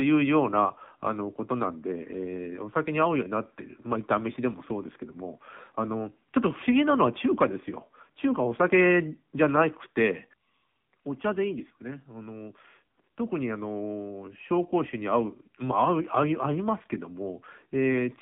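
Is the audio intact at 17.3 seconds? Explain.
No. At 17.3 seconds the speech still carries the AMR narrowband mobile codec damage that runs through the whole clip. Sound is confined to roughly 150 Hz to 3.6 kHz. The vocal-tract model with sparse pulses leaves a plainly buzzy, synthetic voice, which fits a low rate near 7.4 kbps.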